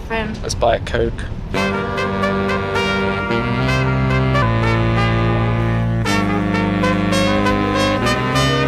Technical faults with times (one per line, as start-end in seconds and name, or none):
4.42-8.68 section at the wrong speed